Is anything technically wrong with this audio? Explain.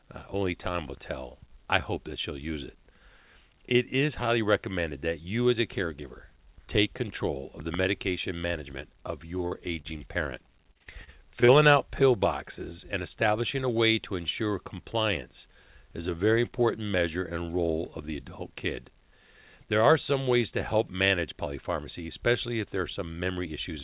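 Yes, there are three packet-delivery problems, all packed into a couple of seconds of this speech, which runs over a narrowband call path (everything stops at 4 kHz, which fits G.711).

At 9.48 to 9.54 s, right after "the medication management of", there's a short concealed packet loss. About 30 ms never arrived in time, so the decoder extended the previous sound to fill the hole, then blended back. You hear a quick smear there.

From 9.81 to 9.99 s there's a short stall from a late packet. The jitter buffer ran dry, and the receiver held the last sound for about 28 ms until the packet showed up, then carried on. Nothing is lost, but one sound drags slightly.

Then from 10.72 to 11.51 s, just before "out pill boxes and", there's repeated packet loss that gives a robotic sound. Half a dozen holes of up to 30 ms each, about 150 ms in all, are patched in quick succession. That's roughly a fifth of the stretch, so it comes out choppy, with pieces missing.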